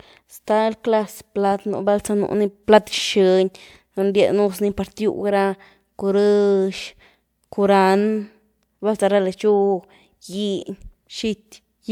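Listening through the speech, nothing stood out as a technical problem at any point.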